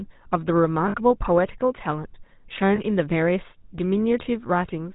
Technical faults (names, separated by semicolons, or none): GSM full-rate codec; lost GSM frames